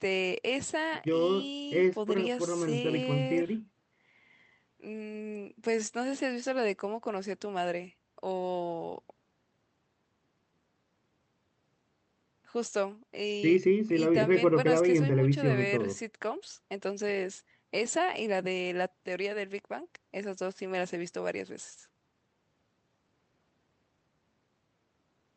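No technical fault can be heard anywhere in this speech recording. It has come through a WebRTC call path, and the high end stops at about 8 kHz, which fits an Opus call codec working as intended.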